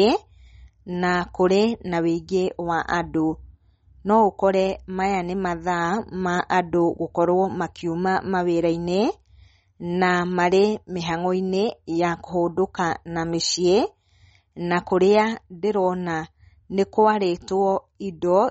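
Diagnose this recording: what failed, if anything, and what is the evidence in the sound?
Codec stage: throughout the speech, nothing is heard above 8.1 kHz, and sibilants turn watery and swirly. The likely cause is MP3 compression short of bits, fitting roughly 32 kbps. A spectrogram shows a hard ceiling with flickering holes where weak lines drop out.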